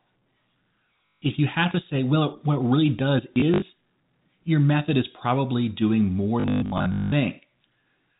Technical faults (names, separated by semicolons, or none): packet loss with last packet repeated